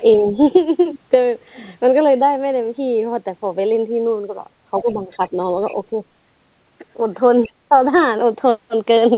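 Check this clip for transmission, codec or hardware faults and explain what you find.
Two faults recur in this speech, heard over a call path whose cut-off near 4 kHz fits a G.711 narrowband codec.

The other side's voice leaking through appears at 0.14–0.23, 4.81–4.96, 5.22–5.3, 5.69–5.76 and 7.43–7.53 s as faint scraps, roughly 25 to 35 dB under the speech. The likely cause is echo the canceller left behind. It differs from crosstalk because it arrives in echo-like fragments.

Speech suppressed in double talk appears at 0.31–0.37, 4.8–5.33 and 5.9–6.01 s, where the talker dips by about 5 to 10 dB. It is likely the canceller ducking during overlap. It differs from packet loss because the level drops rather than the sound breaking off.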